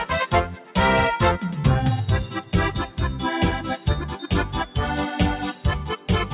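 A speech-tuned noise suppressor left running on this non-speech material pumps the level throughout. It treats sustained parts as noise and pulls them down by up to around 5 dB while attacks pass. A waveform shows an uneven, breathing envelope, and held partials fade in and out on a spectrogram. The call path's bandwidth stops at 4 kHz, which fits G.711 A-law.

Sound cut by the noise suppressor occurs at 0.46 to 0.76 s, dropping about 9 dB, and again at 4.13 to 4.28 s, about 6 dB. Each time the steady material suddenly thins. The waveform envelope sags, and the spectrogram shows a faded vertical band.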